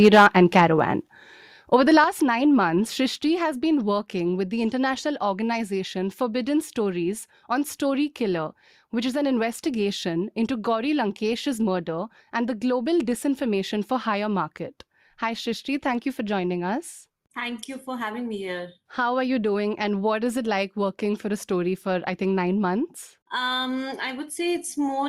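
Right at the start, from 0.04 to 0.27 s, the loudest syllables pick up a harsh, crackly edge. That's microphone overload, most likely from the input volume being set so high that peaks overshoot the converter's ceiling by about 4 dB and get their tops sheared off, with a noticeable chunk of the samples flattened. It happens again, more briefly and more mildly, at 0.55 to 0.59 s, only about 1 dB over, with just a small fraction clipped.

After that come three abrupt level drops, at 1.02 s, 2.04 s and 3.06 s, of about 4, 5 and 2 dB. The voice and the background fall together in a single step each time, with no fade. That pattern fits microphone volume being stepped down, likely the call software reacting to the earlier clipping by cutting the device's input gain in stages, roughly once a second.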